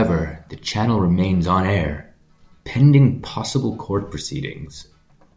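No technical faults can be heard in the recording; the speech signal stays intact and continuous throughout, with nothing disrupting it.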